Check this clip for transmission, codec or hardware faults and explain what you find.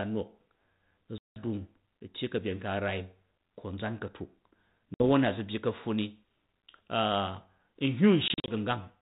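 The clip has three instances of packet loss on an ADPCM call. The telephone-band sound, with light quantisation hiss consistent with 32 kbit/s G.726, carries through. Dropouts occur at 1.18–1.40 s (180 ms of silence), 4.94–5.04 s (60 ms), and 8.28–8.51 s (120 ms scattered over 200 ms, longest run 40 ms). Each hole is hard-edged. Because the decoder's adaptive predictor and step size lose step with the sender's, speech resumes with brief, slight distortion.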